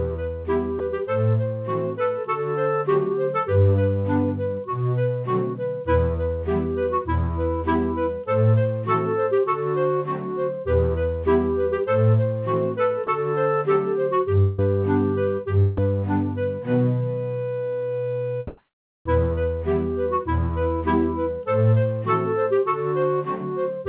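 At 0.79 s, 13.07 s and 15.77 s the sound briefly gives way to a flat, even hiss for about 10 ms each, most likely sound dropped by the voice detector, which judged the material to be background and sent comfort noise instead. Unlike a network dropout, the gap is filled with fresh noise rather than a continuation of the preceding sound.

From 14.40 to 14.59 s, roughly 180 ms of audio is missing, likely a long network dropout. The receiver stretches the last sound into a fading buzz across the whole gap, never reaching silence. That smeared tail of the previous sound is what marks it as lost packets rather than a voice-detector decision.

Between 18.47 and 19.05 s the real background disappears for 580 ms and is replaced by steady, featureless hiss about 23 dB different in level. This is comfort noise in place of the background, likely from discontinuous transmission. It lasts a full pause and replaces texture rather than cutting into the sound itself.

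Right at the end of that stretch, 19.03 to 19.05 s, the returning sound begins abruptly with about 20 ms of its soft beginning gone. This is an onset clipped by the voice detector, likely because it reacted late. The hard edge at the restart distinguishes it from the mid-sound gaps earlier. Throughout, the call codec's band limit leaves nothing above 4 kHz.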